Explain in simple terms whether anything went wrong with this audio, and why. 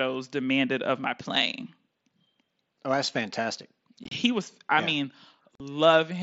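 Unconcealed Bluetooth headset packet loss hits at 4.04–4.12 s, just after "that's fantastic", and again at 5.55–5.60 s. Tiny chunks of voice travelling from headset to phone went missing and nothing filled them, so the speech breaks into short, abrupt gaps lasting a few hundredths of a second.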